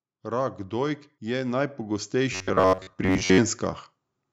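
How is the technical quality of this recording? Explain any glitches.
The recording has two faults in its 4-second length, and the call's microphone processing has taken out the lowest bass, which is normal.

From 0.29 s to 3.66 s there is an automatic gain rise. The gain control judged the input too quiet and raised its gain steadily by about 13 dB. What separates this from the speaker simply talking louder is that the background noise swells along with the voice, rising gradually over several seconds rather than jumping.

From 2.33 s to 3.40 s, most of the speech turns into a rigid, metallic buzz pitched at about 94 Hz. It still loosely tracks the speech. This is likely robotic sound from repeated short buffers: new audio arrived too seldom, so the software looped the last fragment, about 10.7 ms long, while the real audio was skipped. Unlike a natural low or creaky voice, the buzz holds a fixed rate set by the buffer length.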